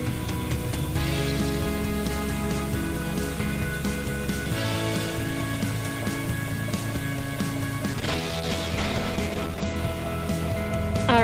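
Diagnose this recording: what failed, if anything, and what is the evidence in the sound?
From 7.90 s to 9.82 s the sound loses its top end and turns coarse and watery, then opens back up. The stage is the call's network path driving the codec: a call bitrate drop, where the encoder's target fell from 32 kbps to 12 kbps and sat near the bottom for about 1.8 s. At that rate Opus codes more coarsely and narrows the audio bandwidth from 20 kHz to 8 kHz, which accounts for the muffling.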